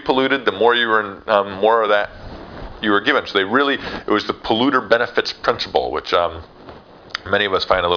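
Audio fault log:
There is no fault in this audio.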